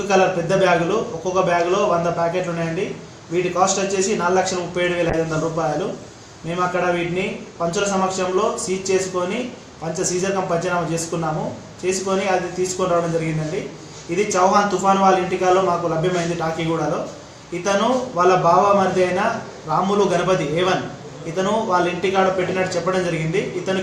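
From 5.1 s to about 9.0 s the audio turns rough and muffled, with the top end gone, as the band narrows from 20 kHz to 12 kHz. This is a call bitrate drop, which points to the encoder falling from around 96 to 28 kbps, at its lowest for about 2.5 s.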